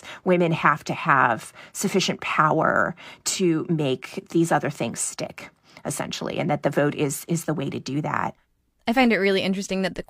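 Nothing technically amiss stood out on listening to this speech recording.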